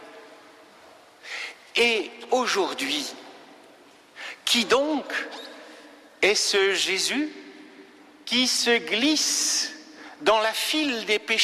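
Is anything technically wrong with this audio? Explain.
No, nothing in this audio points to a technical fault. There are no audible defects to explain.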